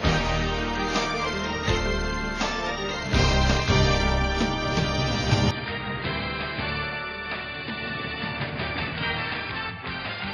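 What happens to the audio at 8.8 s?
At 8.8 s the sound is dull and boxy, with nothing above 4.9 kHz. From 5.51 s to the end it is roughly 10 dB quieter, with faint new background noise and no gap at the change. The likely cause is an input switched to a poorer device.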